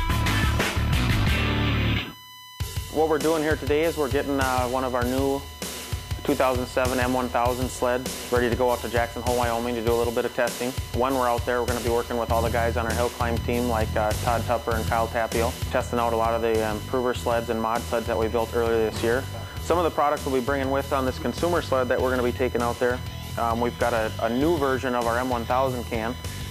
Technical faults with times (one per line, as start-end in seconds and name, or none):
0.00-26.50 USB whine